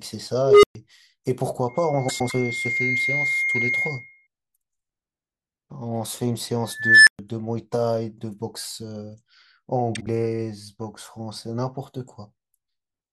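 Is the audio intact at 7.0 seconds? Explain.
No. At 7.0 seconds a whistle-like tone around 2 kHz is swelling over the speech. It grows to a very loud squeal over about 0.35 s, clips, and then drops into a silence of about 0.12 s. The whole event spans 6.72 to 7.19 s. This is an unstable filter: a recursive filter running with bad coefficients feeds its own output back with too much gain, so the signal grows until the numbers overflow and the output cuts out until the filter resets.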